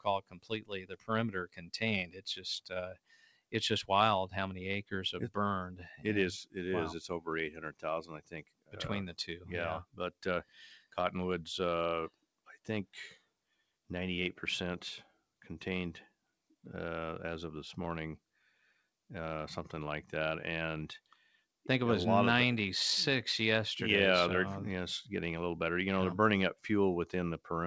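A noise suppressor applied to music or sounds was left running on this audio. Built for speech, it treats sustained tones, ambience and decays as noise, so the level swings by roughly 10 dB as attacks pass and held material sinks, giving a pumping, thinned texture throughout. The clearest cases of sound cut by the noise suppressor fall at 0.0–1.1 s, 1.46–3.53 s, 7.54–7.84 s, 8.19–8.75 s, 9.84–10.97 s, 12.09–12.67 s, 13.17–13.89 s and 21.06–21.39 s. In these stretches steady or fading content drops by about 17 to 19 dB, or only about 9 dB at 21.06 s, and tails are clipped short. The audio also passes through a call path whose band stops at 8 kHz, which fits G.722 at 64 kbps.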